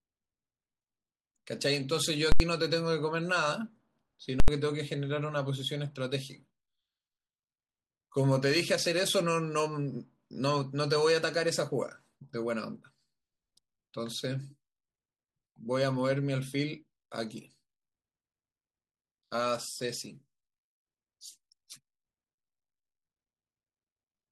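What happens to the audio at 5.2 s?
Nothing goes wrong at 5.2 s; the speech carries on intact through that moment, with no dropout, click or distortion to be heard.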